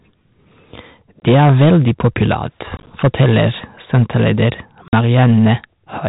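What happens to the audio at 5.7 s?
At 5.7 s you're hearing the hard clipping that runs through the whole clip: speech driven about 8 dB past the ceiling, with about 4% of samples sliced flat into harsh crackle.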